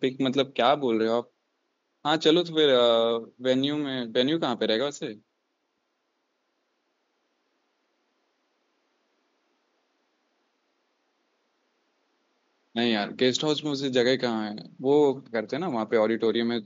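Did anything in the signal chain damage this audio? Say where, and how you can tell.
No, nothing in the signal chain damaged this audio; the only background is the room's own noise, sitting about 49 dB below the speech.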